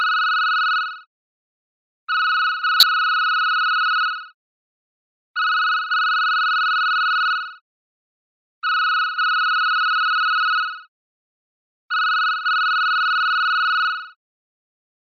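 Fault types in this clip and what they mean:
Corrupt frame decoded: from 2.80 to 2.84 s a damaged compressed frame, likely a couple in a row, is played as if valid, giving a brief burst of energy at the wrong frequencies. A dropout would fall silent, and a click would be a single sharp tick.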